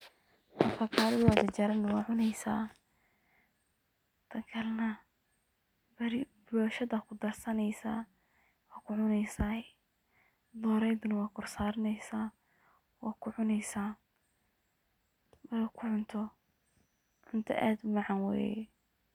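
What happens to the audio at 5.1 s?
Nothing goes wrong at 5.1 s; the speech there plays through cleanly, with no dropout, click or distortion.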